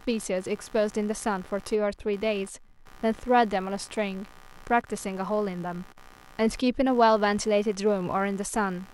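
A low buzzing chirp, pulsing around 70 times a second and well below the speech, runs throughout: computer activity noise, from processor or peripheral load disturbing the shared audio ground.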